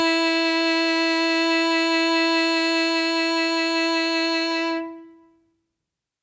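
Nothing technically wrong can be heard in this music clip. It has passed through call microphone processing, which takes out the lowest bass and leaves nothing above 8 kHz.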